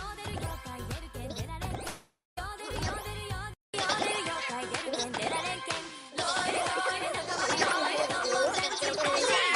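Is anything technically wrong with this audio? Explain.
Yes, two faults are audible.

From 1.87 to 2.39 s there is a long network dropout. About half a second of audio likely never arrived. The receiver stretches the last sound into a fading buzz or hiss, then leaves about 0.17 s of silence. The sound then resumes with that part missing.

At 3.54 s the input likely switched to a poorer device. There is a 0.2 s silence at the change. From then to the end, nothing sounds above 10.7 kHz, so the sound is duller. The level shifts by about 5 dB, and a faint new background noise appears.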